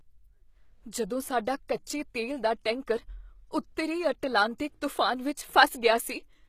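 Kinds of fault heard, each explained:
HE-AAC compression: The treble of the speech is plainly damaged, bright but synthetic, with gritty, metallic s sounds and nothing above 14.9 kHz. This is likely HE-AAC at a low bitrate, around 20 kbps, rebuilding the top band from copied lower bands, so harmonics misalign.
pre-echo: At 1.68 s a brief hiss, about 12 ms long, leads into a sharp attack, which sounds softened and smeared. The codec spreads its quantisation noise across a whole transform block, so noise sized for the loud onset also fills the quiet moment before it.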